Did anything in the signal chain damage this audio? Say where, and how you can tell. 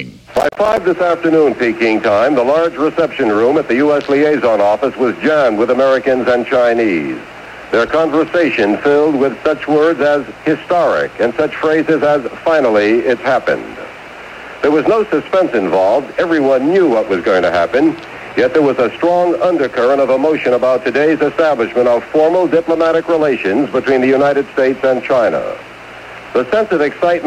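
Yes. From 0.37 to 0.78 s there is processor overload crackle, a damaged stage at the driver or buffer level. The sound breaks into a dense, gritty tearing made of many tiny hard-edged dropouts to silence, each roughly 10 ms long, which points to short audio buffers of about that length. The processor missed its deadline on something like fifteen buffers over that stretch. Each empty buffer left a brief silent gap, and the crackle stops once the load clears.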